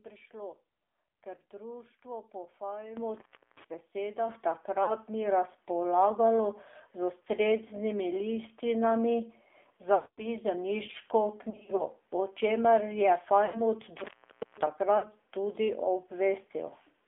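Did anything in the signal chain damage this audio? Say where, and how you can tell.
Yes, at three stages. At the codec, the whole clip is band-limited to roughly 300 Hz to 3.5 kHz and has a buzzy, synthetic quality, which fits AMR narrowband mobile coding at a low mode near 7.4 kbps. Unlike a plain low-pass filter, it also adds that vocoder texture.

In the analogue wiring, intermittent contact opens the line at 3.15–3.65 s and 13.98–14.67 s, for about 0.34 s and 0.50 s. The sound cuts out abruptly with crackle at both edges and leaves faint hiss. A codec gap would fade out smoothly rather than click.

On the network, lost AMR speech frames hit at 4.84–4.93 s (just before "ni razpolagalo"), 9.96–10.29 s, 11.50–11.83 s, 13.46–13.59 s and 14.98–15.05 s. The decoder stretches the last sound and fades it out within about 0.2 s, with no crackle. The sound returns briefly weak or rough. The 11.50 s stretch consists of scattered short warbles.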